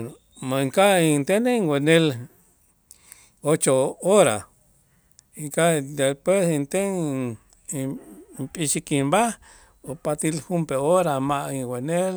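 No technical faults can be heard at any point in the recording, and the signal stays steady and intact throughout.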